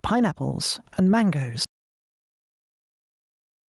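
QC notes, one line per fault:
throughout, gain pumping: the gain ducks by about 15 dB under each loud syllable, squashing loud and soft parts closer together, likely input gain set far too high with a fast limiter pulling it back.
1.65 s to end, audio dropout to silence: the speech cuts off mid-flow and stays at complete silence with no room tone, likely lost input while the recorder kept writing silence.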